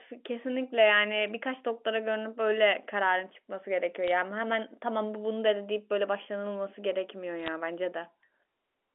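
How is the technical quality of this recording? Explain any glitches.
The recording carries speech over a narrowband telephone path, with faint level-following quantisation hiss and nothing above about 3.4 kHz. There are three brief glitches: bit errors on a digital phone line, at 1.22–1.30 s, 4.08–4.11 s and 7.43–7.48 s. Each burst flips a few bits, so individual samples jump to wrong values. Hits on sign or high-order bits produce sharp ticks, heard as short crackle over otherwise unchanged speech. The error rate is low, between about 0.1 and 0.3 percent, and is heaviest in the last burst.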